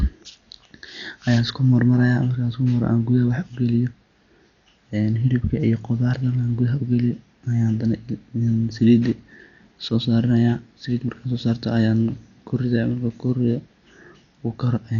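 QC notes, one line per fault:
Throughout, Dolby Digital compression: the speech sounds dull and muffled, with nothing above about 6.9 kHz and a rough, fluttering noise around voiced tones. This fits a likely AC-3 encode at a low bitrate near 48 kbps, where many frequency lines get no mantissa bits and the decoder fills them with dither noise.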